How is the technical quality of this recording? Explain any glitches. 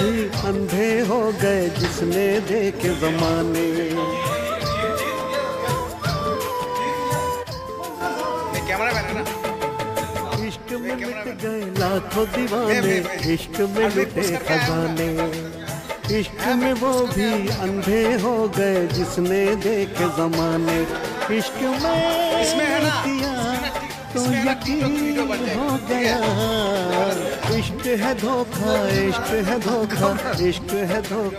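Two brief level dips mar it. From 7.44 to 8.01 s and 10.36 to 11.76 s, the sound abruptly falls about 6 dB, likely one channel dropping out before the mono sum.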